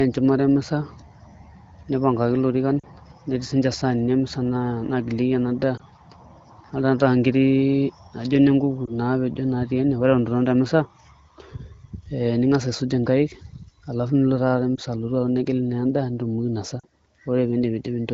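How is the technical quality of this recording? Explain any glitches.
Five brief bursts of lost AMR speech frames interrupt the speech, with light colouring from the AMR wideband (HD Voice) codec audible throughout. The dropouts fall at 2.80–2.87 s (after "nipangaki ilorikan"), 5.77–5.82 s (after "ena daa"), 8.86–8.91 s (after "naa ijio ine nkuku"), 14.76–14.79 s and 16.80–16.84 s. Corrupted frames forced the decoder to extrapolate from the last good one, producing a short dip or warble. On a spectrogram this appears as a thin smeared, dimmed vertical band.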